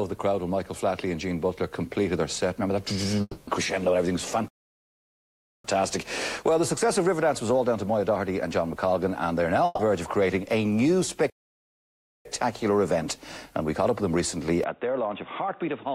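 At 3.21 s the stream was likely hit by a long network dropout. The receiver continued the last sound as a fading buzz or hiss for about 260 ms, with a brief silence, and the audio resumes at 3.49 s with that stretch missing.

From 4.48 to 5.65 s a playback stall likely starved the player of data. The output cuts out mid-flow for about 1.16 s. A second stall from 11.30 to 12.25 s silences the sound for about 0.95 s, again mid-flow.

At 9.65 s a burst of packet loss removed about 140 ms of audio. The receiver bridged the gap by extending and fading the last sound, so a smeared, dying tail runs to 9.81 s, and the audio jumps ahead with that portion gone.

At 14.64 s the input was likely switched to a poorer device. A narrower band passes from there to the end, so the sound turns abruptly dull and narrow with no gap. The level is about 5 dB lower, and a faint new noise floor sits far beneath it.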